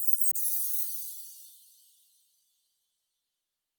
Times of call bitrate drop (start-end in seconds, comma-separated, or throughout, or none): 0.33-3.79